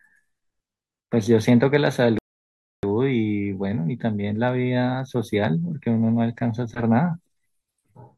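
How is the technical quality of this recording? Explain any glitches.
The recording has one clear glitch, a rebuffering stall, from 2.18 s to 2.83 s. The player ran out of downloaded audio and paused until more data arrived, so the speech falls silent for about 0.65 s and then resumes exactly where it broke off. What sets it apart from a dropout is that no speech is missing: the speech picks up with nothing skipped. The only effect is a gap inserted into the timeline.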